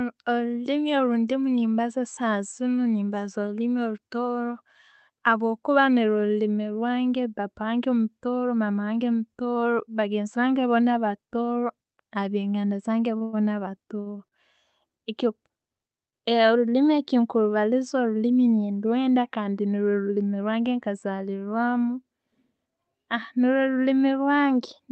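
From 13.17 to 14.34 s the speech has repeated stalls, a stutter. Packets came in late, slower than playback. The jitter buffer ran dry four times. Each time, the receiver held the last sound until audio arrived again. About 219 ms was filled this way, nearly a fifth of that stretch. The longest hold lasts 103 ms and fades in level. Nothing is lost. The speech drags and catches instead.

At 16.10 to 16.15 s there is a short stall from a late packet. The packet's delay jumped by 30 ms. It was not there when due. The receiver stretched the last sound for 30 ms, then picked up exactly where it stopped. No speech is missing. One sound is held slightly too long, with a slight buzz or dip. Throughout, the call codec cuts the top end off above about 8 kHz, which fits Opus at around 32 kbps.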